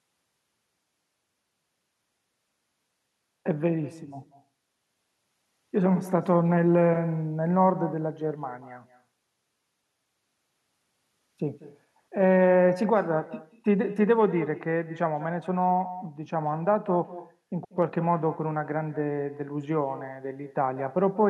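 From start to finish the speech carries an echo with no canceller. The far end is evidently playing the call over a loudspeaker, its microphone picks that playback up, and nothing subtracts it before it is sent back. Every phrase therefore returns roughly a fifth of a second later, sitting about 16 dB below the direct speech. The returning copy sounds thinner, trailing each syllable like a faint hollow double.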